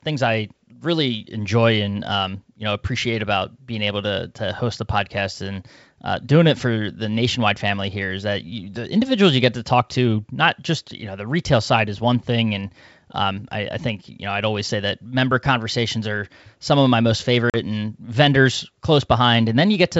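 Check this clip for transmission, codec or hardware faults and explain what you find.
One transmission fault is audible: packet loss on an ADPCM call, from 17.50 to 17.56 s, between "some of my most" and "and vendors". About 40 ms of audio went missing, which suggests a couple of lost packets. The gap was filled with silence, so the speech drops out with hard edges. Because the decoder never received those packets, its adaptive predictor and step size stopped tracking the sender's. When the speech resumes, the decoder starts from a mismatched state before it locks back on. Around the gap, the G.722 wideband coding at 64 kbit/s carries the speech with only faint coding damage.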